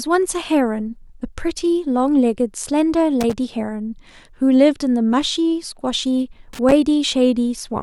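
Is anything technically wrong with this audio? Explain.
Yes, there's loose connector crackle in this speech, two short bursts at 3.21–3.33 s and 6.53–6.72 s. A worn or dirty contact is flickering open and shut, so the signal gets chopped in fast, irregular bits, and you hear a scratchy crackle lasting a fraction of a second each time.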